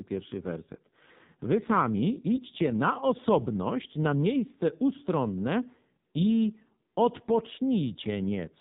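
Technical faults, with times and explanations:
Throughout, AMR narrowband mobile codec: nothing passes above 4 kHz, and the heavy coding makes speech buzzy and synthetic, consistent with a low rate near 5.9 kbps.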